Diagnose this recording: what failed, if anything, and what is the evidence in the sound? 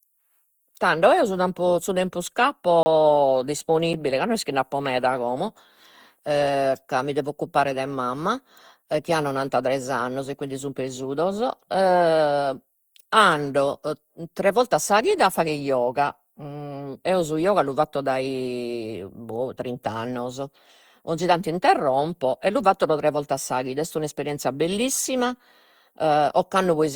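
The codec stage shows generation loss throughout the speech. The sound is swirly, smeared and hollow, more than one encode would leave. Consonant attacks blur. The most likely cause is a chain of repeated lossy passes, about seven, each fitting Opus at 64 kbit/s. Every re-encode quantises again on a shifted frame grid. Noise piles up from pass to pass. The band stops near 20.3 kHz.

Two blocks of digital silence point to a driver or buffer stage. The first runs from 2.83 to 2.86 s, a 30 ms hole right after "su tempo su tempus". The second is a tick at 3.93 s, about 7 ms long, just before "ca no est chi". The signal drops to silence and returns with no fade. These are likely underruns, where the output buffer was not filled in time.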